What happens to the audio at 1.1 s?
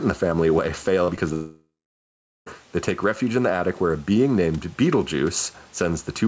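Right at 1.1 s you're at the tail of a short concealed packet loss. Just after "the family away", about 40 ms from 1.04 to 1.10 s never arrived in time, and the receiver papered over it by stretching the preceding sound and blending back in. Then there's a second, shorter one from 1.16 to 1.19 s. It sounds like a quick smear or wobble, and a brief consonant can get swallowed.

Underneath all that there's gain pumping, with level swinging around 5 dB. That's likely a fast limiter or compressor reining in a mic gain set far too high, which leaves everything squashed.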